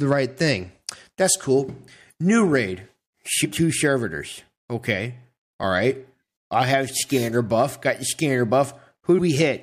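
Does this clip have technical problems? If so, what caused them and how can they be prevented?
Yes. Damaged data in the compressed stream at 3.44 to 3.46 s: corrupted bytes make the decoder misread frames and lose sync, producing a brief glitch. Preventing it means transmitting with checksums or error correction and validating files before decoding.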